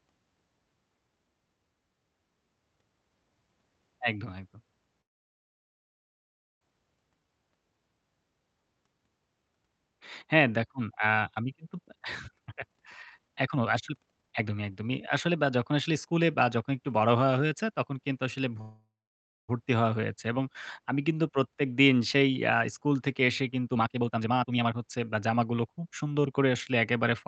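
Packets most likely stalled in transit at 5.01 s and the jitter buffer ran dry. This call audio freeze holds the sound for about 1.6 s, until 6.63 s, with nearly all of that silent after a brief fading tail. When the stream resumes it picks up exactly where it stopped. Nothing is lost, but the delay grows by the length of the gap.

From 11.81 s to 16.72 s a jitter buffer speed-up drains the surplus of audio that had built up. The receiver trims short pitch-period slices over and over, playing the speech at about 133% speed at unchanged pitch. Roughly one and a half seconds is cut, and the passage sounds rushed.

A second call audio freeze runs from 18.61 s to 19.50 s, about 0.87 s long. A short decaying tail gives way to roughly 0.58 s of silence before the audio carries on intact.

Another jitter buffer speed-up follows from 23.67 s to 26.39 s at about 132%. It removes about a second of audio, and the speech again sounds hurried at normal pitch.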